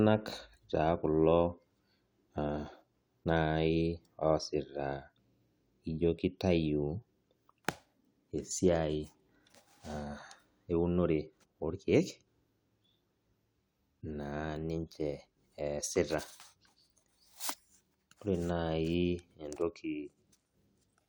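No technical faults can be heard anywhere in the speech recording, and the signal holds steady throughout.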